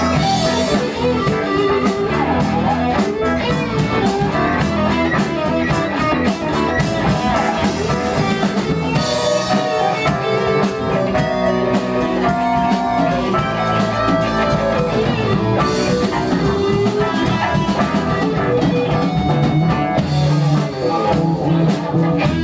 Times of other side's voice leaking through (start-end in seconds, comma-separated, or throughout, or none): none